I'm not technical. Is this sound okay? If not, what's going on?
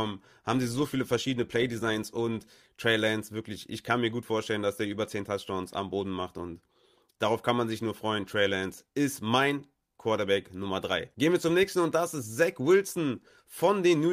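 Yes, this recording sounds okay. Nothing in it stands out as a technical problem that needs explaining.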